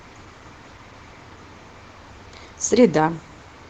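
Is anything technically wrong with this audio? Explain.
No, nothing technically wrong with this speech recording.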